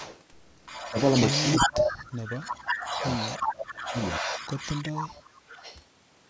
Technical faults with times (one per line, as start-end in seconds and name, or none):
0.00-0.23 echo leak
0.65-5.79 echo leak
0.87-0.96 speech suppressed in double talk
1.41-3.06 speech suppressed in double talk
3.35-3.94 speech suppressed in double talk
4.20-4.27 speech suppressed in double talk
4.54-4.94 speech suppressed in double talk